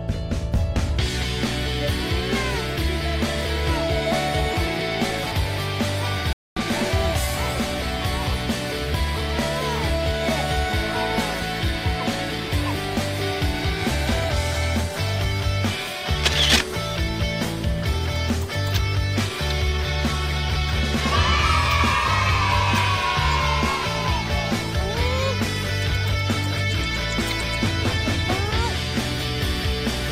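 At 6.33 s the sound just stops dead for about 234 ms, then picks up again at 6.57 s. That's a playback stall, most likely the player running dry or its thread getting blocked, so the output sits silent until it catches up.

From 16.02 s to 19.79 s there's a jitter buffer speed-up. The receiver had built up too much audio and trimmed tiny pitch-period slices back to back, roughly 70 ms in all. It runs about 2% fast at unchanged pitch.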